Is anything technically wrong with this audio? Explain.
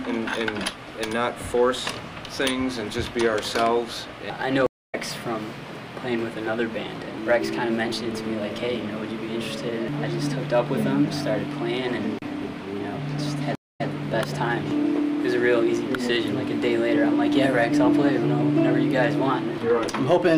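Yes, there are two stream reconnects. At 4.66 to 4.95 s the audio drops to silence for about 214 ms, then comes back a fifth of a second further on, so a short stretch is skipped. At 13.55 to 13.87 s there is a 191 ms gap, after which the sound resumes 131 ms earlier and repeats that bit. Each time, the connection broke and the player reconnected and started a fresh decoder mid-stream, so playback picks up at a different point, with the first moment muted or fading in.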